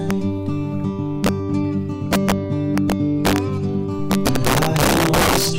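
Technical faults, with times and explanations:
0.11 s, 1.24–1.29 s, 2.13–2.32 s, 2.78–3.38 s and 4.11–5.49 s: integer overflow. Loud music peaks exceed the integer ceiling and wrap to the opposite sign instead of clamping, producing harsh cracks far sharper than clipping. The overshoot grows from barely over the limit at 0.11 s to about 8 dB in the final stretch.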